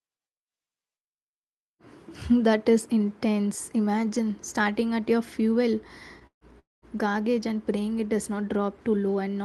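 Speech heard over a call path whose coded sound stops near 12 kHz shows two call audio freezes, likely from packets stalling until the jitter buffer ran dry. After "starting at your fuel" the sound hangs from 6.27 to 6.44 s, and again from 6.59 to 6.85 s before "garbage and praying it". Each begins with a fading buzz or hiss continuation that decays to silence, about 90 ms and 170 ms respectively. Speech resumes where it stopped, adding 144 ms and 228 ms of delay with nothing lost. On a waveform these appear as a decaying tail into flat gaps. A spectrogram shows smeared, fading harmonics, then blank columns.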